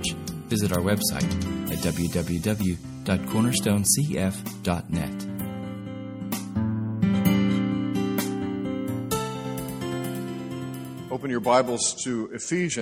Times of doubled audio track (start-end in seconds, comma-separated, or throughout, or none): 9.45-11.17